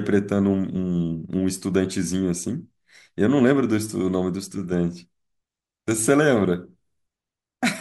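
Nothing in the recording stood out as a technical problem on listening.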